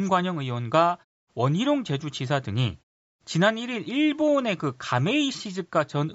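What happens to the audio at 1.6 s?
At 1.6 s the speech is intact, with no dropout, click, distortion or other fault at that moment.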